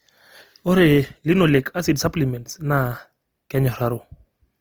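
From start to finish the speech sounds noisy, rough and grainy, with less swirling than MP3 would give, and content reaching about 20.2 kHz. This is likely Opus compression in music mode, which fits a low bitrate near 24 kbps.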